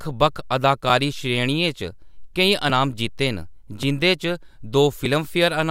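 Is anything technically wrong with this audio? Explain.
Yes. The speech has three small skips, at 2.70, 3.83 and 5.06 seconds. Each is a jump forward, losing roughly 10 to 30 ms. The likely cause is a dropped buffer (overrun): unread samples were overwritten, and the remaining audio was spliced together.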